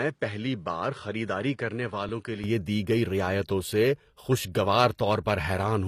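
From the start until 2.44 s the speech sounds duller and somewhat quieter, with nothing above 10.5 kHz, a faint added hiss well below the speech, and an immediate brightening with no gap at 2.44 s. That pattern is likely an input switched to a poorer device for that stretch before the fuller microphone returned.

At 2.09 s there is a tiny, nearly soundless dropout of about 2.6 ms: an underrun with held sample. The output buffer briefly ran dry and the converter froze on its last value. Playback then resumed where it stopped, so there is no real click.

Throughout, sibilants and upper treble sound gritty and metallic, and nothing sits above 14.9 kHz. This is likely the plainly audible mark of HE-AAC compression, at a rate consistent with around 24 kbps. The treble is resynthesised from copied lower bands rather than coded.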